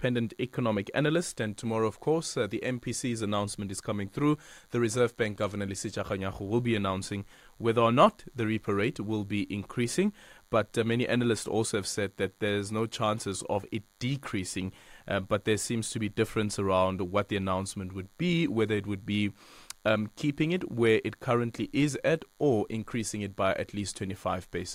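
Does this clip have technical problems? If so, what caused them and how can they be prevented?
Yes. Running under the speech for the whole clip there's a thin, steady buzz at 100 Hz, classic DECT cordless phone buzz. A DECT handset or base nearby transmits a short radio burst every 10 ms, and something in the audio chain rectifies those bursts, so you get a 100 Hz tone packed with harmonics. It sits roughly 40 dB below the speech, so it's faint but always there. To prevent it, keep DECT phones and bases well away from the mic, cables and preamp.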